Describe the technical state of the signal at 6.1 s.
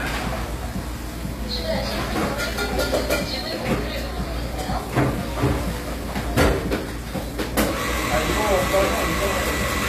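At 6.1 s, as throughout, everything above 14.9 kHz is missing, a flat ceiling on the spectrogram with empty space above it. This points to low-bitrate audio saved at a high bitrate, likely a very low-rate source re-encoded as high-rate MP3, which cannot restore the discarded detail.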